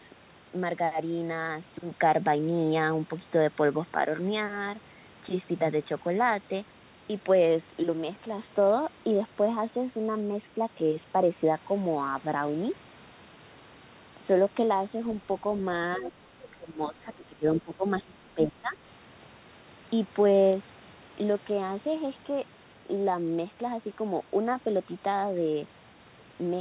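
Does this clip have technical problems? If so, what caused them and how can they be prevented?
Yes. The speech dips sharply three times in close succession, from 15.98 to 16.22 s, from 16.51 to 17.45 s and from 17.62 to 18.78 s, losing about 15 dB in the first stretch and nearer 20 dB in the later two. This is speech suppressed in double talk, likely caused by the echo canceller mistaking this talker for loudspeaker echo while the far side was also talking, and attenuating both. A canceller with better double-talk detection and gentler residual-echo suppression prevents it.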